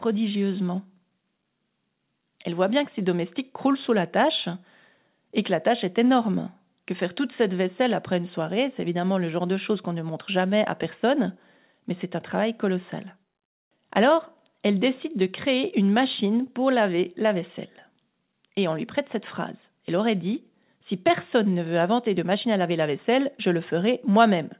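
No technical faults can be heard anywhere in the speech. The call path it came through leaves nothing above 4 kHz, which fits a narrowband telephone codec such as G.711 mu-law at 64 kbps.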